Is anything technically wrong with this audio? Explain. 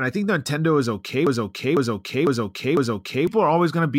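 Yes. From 1.27 s to 3.27 s there is a broken-record loop. A half-second fragment of the speech plays four times, back to back, identically. The playback or stream likely stalled and resent its last buffered piece. The speech that should have played there is lost.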